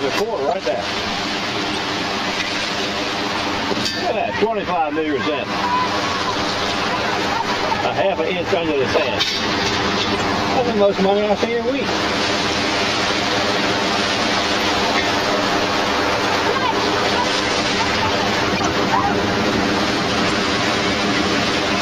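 A hollow, phasey colouring runs through the whole clip. This is channel delay (comb filtering): one channel lags by around 10 ms, and summing to mono cuts notches from near 50 Hz upward. Short chirping bursts of noise break in at 0.48–0.55 s, 1.71–1.78 s, 8.96–9.06 s, 10.12–10.21 s, 18.55–18.70 s and 20.25–20.32 s, the loudest at 9.0 s. Each is a corrupt frame decoded, where damaged compressed data puts energy at wrong frequencies.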